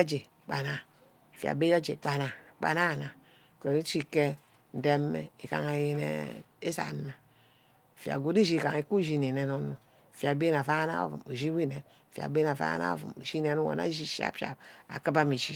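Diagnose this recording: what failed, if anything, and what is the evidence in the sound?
Nothing has failed: the speech arrives through Opus voice compression at 24 kbps in hybrid mode with the full band kept, content reaching up to 20.2 kHz, and only light coding damage consistent with the codec working as intended.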